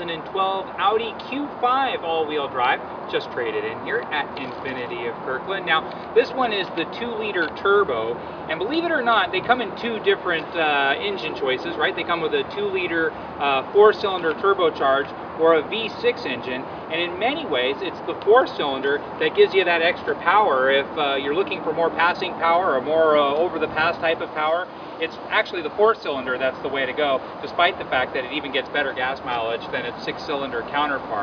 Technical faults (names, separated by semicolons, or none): none